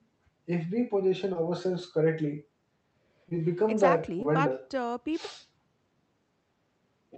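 Speech carried over a call path that sounds like Opus at around 32 kbps, band-limited to 8 kHz, with three spots of short concealed packet loss: 1.33–1.37 s, 3.29–3.33 s and 4.23–4.26 s. Each time roughly 20 ms of audio arrived too late, and the receiver patched the gap by extending the preceding sound before blending back into the real signal. You hear a quick smear or wobble, and a brief consonant can drop out.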